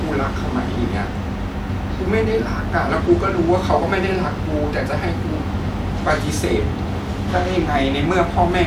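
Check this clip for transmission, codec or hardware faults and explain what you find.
The speech signal stays continuous and stable throughout, with no audible fault of any kind.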